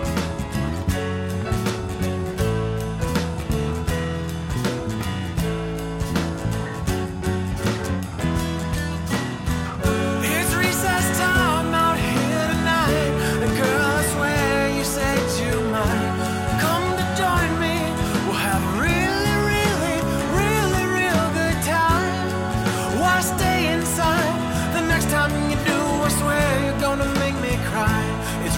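No technical fault can be heard anywhere in the recording.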